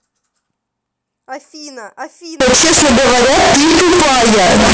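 A speech clip that, from 2.40 s to the end at 4.73 s, turns into loud, harsh distortion with quiet stretches as loud as the rest. This is likely signed and unsigned mixed up in 16-bit samples: each zero crossing jumps full-scale. The waveform shows a solid slab, and the spectrogram shows broadband energy.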